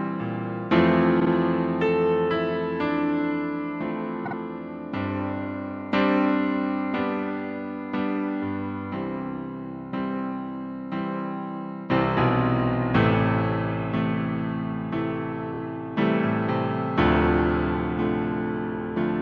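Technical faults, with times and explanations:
1.19–1.29 s, 4.25–4.35 s and 15.53–15.58 s, repeated frames: a short stretch of compressed audio plays three times in a row, giving a brief stutter. The first two blocks are 52.2 ms each, adding 104.5 ms; the last is 26.1 ms, adding 52.2 ms. The block lengths fit codec frames of about 26 ms. Unlike a dropout, nothing is lost; the sound simply lengthens.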